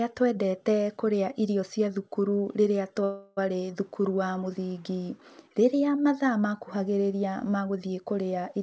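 From 3.04 to 3.39 s the speech stops and a fading buzz fills about a third of a second before it resumes where it left off, nothing lost. This call audio freeze likely came from delayed packets draining the jitter buffer, with the receiver stretching the last sound, on a band-limited call path cut off at 8 kHz.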